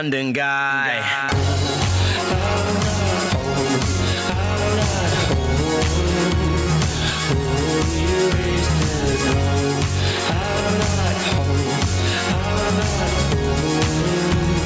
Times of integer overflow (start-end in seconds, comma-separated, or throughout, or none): none